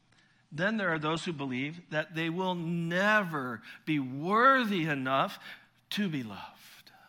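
The player began on a low-bitrate version of an adaptive stream, so until 2.0 s the speech is dull with nothing above 9.7 kHz, then brightens abruptly before "they will never be".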